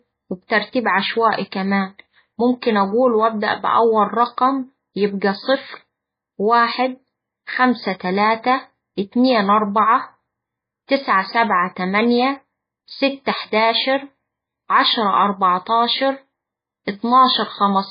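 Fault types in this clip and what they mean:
MP3 compression: heavy damage across the whole speech recording, with nothing above 5 kHz, so sibilants lose their edge, and a watery, swirly texture where weak detail flickers in and out between frames. That points to a very low bitrate, likely around 17 kbps.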